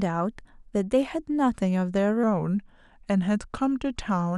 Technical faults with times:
2.23-4.38 wrong sample rate

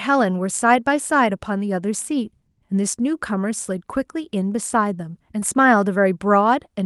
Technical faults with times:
5.39-5.43 short concealed packet loss

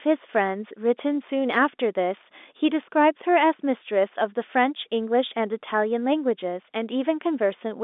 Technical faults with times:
none

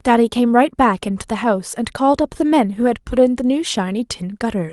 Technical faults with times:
none

